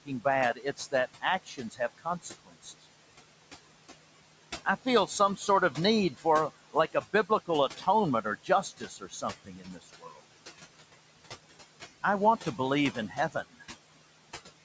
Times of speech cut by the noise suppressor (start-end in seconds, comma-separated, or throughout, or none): 0.05-2.84, 4.65-5.77, 6.73-7.87, 8.24-10.19, 12.92-13.62